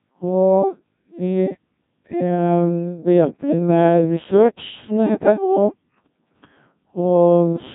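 The whole speech clip has gone through the Codec 2 vocoder, and it shows: only pitch, voicing, energy and a rough spectral shape survive, rebuilt from sine waves, so it's robotic and buzzy. The heavy smearing fits a rate around 1.6 kbit/s, and nothing comes through above about 3.8 kHz.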